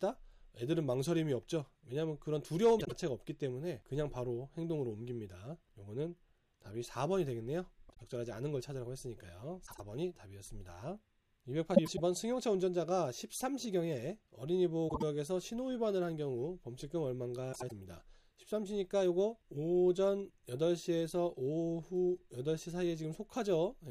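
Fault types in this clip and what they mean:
Frames out of order: six brief garbled flutters, from 2.79 to 17.72 s, each lasting 0.13 to 0.25 s. Two neighbouring blocks of 52, 78 or 104 ms played swapped, which fits frames of about 26 ms; no time is lost.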